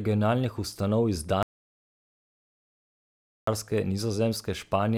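At 1.43 s the speech drops out to dead silence, with no room tone at all, until it picks back up at 3.47 s. That's an audio dropout to silence, likely a lost input or stray mute while recording continued, and about 2.05 s of speech is simply gone.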